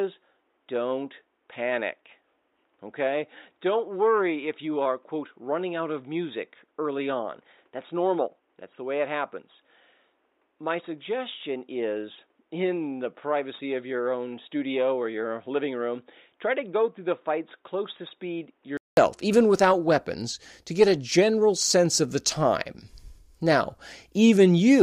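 A speech clip in which the recording system was likely capturing through a poorer input device, an input switched to a poorer device, from the start until 18.97 s. That stretch carries nothing above 3.8 kHz, sounding dull and boxy, runs about ten decibels quieter, and has a faint added noise floor. A brief silence of 200 ms marks the switch back to the fuller sound just before "even without weapons to".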